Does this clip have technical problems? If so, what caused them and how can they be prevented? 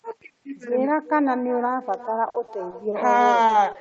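Yes. Throughout the speech there is echo with no canceller: a quieter, thinner copy of each phrase returns around 0.4 s later, about 15 dB below the original. The far end played the call through a loudspeaker, its microphone picked it up, and nothing subtracted it, so the sound made the full network round trip back. Unlike room reverberation, which smears continuously, this is a distinct delayed repeat with a gap before it. Enabling acoustic echo cancellation on the far-end device, or having that side use a headset, prevents it.

From 2.29 to 2.95 s there is repeated packet loss with a robotic sound. Four separate gaps, the longest 50 ms, were patched by extending the preceding sound, and about 60 ms of real audio is gone. The result is a choppy stretch. A single dropout would give one smear, but here the holes follow one another closely enough to sound mechanical. A more stable connection, or forward error correction and a larger jitter buffer, would prevent it.

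Between 3.47 and 3.51 s there is a short stall from a late packet. The jitter buffer ran dry because the delay jumped by 20 ms, so the receiver held the last sound for 20 ms until the packet arrived, then carried on from the same point. Nothing is lost, which separates it from concealed loss. The speech only lingers briefly with a slight buzz or dip. An adaptive jitter buffer with a little more headroom prevents this.

From 3.73 to 3.77 s there is a short concealed packet loss. About 20 ms never reached the decoder and was filled by continuing the preceding sound before blending back into the real audio. Unlike the stall just before it, audio is actually missing here, so it comes across as a brief smear or wobble. Forward error correction or packet redundancy on the sending side would prevent it.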